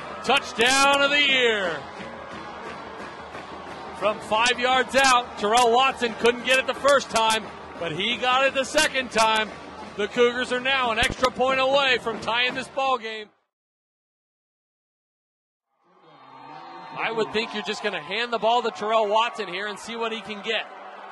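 At 11.03 s a loud pop breaks in, two sharp thumps in quick succession ending by 11.14 s, standing well above the surrounding level while the sound continues underneath. The likely cause is a sudden voltage step or pulse entering the chain, such as a plug, switch or static discharge, shaped by the following circuits. On a waveform it shows as two tall spikes; on a spectrogram, as two thin vertical bars spanning the full frequency range.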